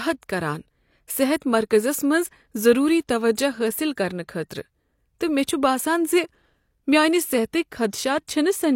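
Pre-echo affects this speech recording from 1.37 to 1.42 s: a short hiss lasting about 52 ms rises just ahead of a sharp attack, and the attack itself sounds softened and smeared. It comes from transform coding, which spreads quantisation noise evenly across each block. Because this attack lands late in its block, noise sized for the loud onset also spills into the quiet stretch before it.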